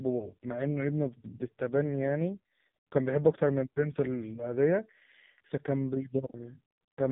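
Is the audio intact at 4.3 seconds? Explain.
No. At 4.3 s the speech carries AMR narrowband mobile codec damage, as it does throughout. Nothing passes above 3.8 kHz, and heavy low-bitrate vocal-tract modelling, consistent with about 5 kbps, leaves it buzzy and synthetic.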